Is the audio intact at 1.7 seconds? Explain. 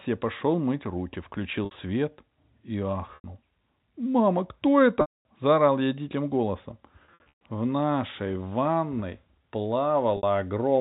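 No. From 1.65 to 1.71 s, right after "я пошел мыть руки", packet loss with pitch repetition fills a 60 ms gap by repeating the last pitch period. It sounds like a briefly held, buzzy tone rather than a silent dropout.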